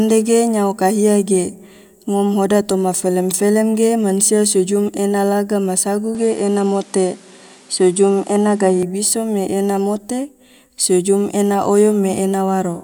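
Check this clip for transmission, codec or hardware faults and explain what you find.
The input likely switched to a poorer device from 6.15 s to 8.83 s in this speech recording. The replacement path passes a narrower band, with nothing above 11.4 kHz, and brings its own tone and a faint new background noise sitting well beneath the speech. There is no gap at the changeover and the loudness stays about the same, so the fault is heard as the speech abruptly losing its top-end air and sounding duller and boxier, then clearing again at 8.83 s.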